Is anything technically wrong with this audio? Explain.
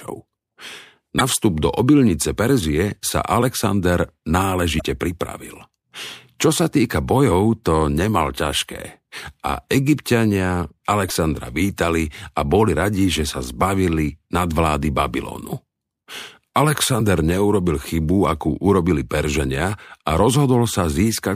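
Yes. Damaged data in a compressed stream affects the speech at 1.17 to 1.21 s, 4.77 to 4.82 s, 7.30 s, 11.07 to 11.11 s and 16.97 to 17.01 s. Corrupted bytes make the decoder misread frames and lose sync while it hunts for the next valid header. Each spot comes through as a brief chirp, squawk, click or short hole of under 50 ms.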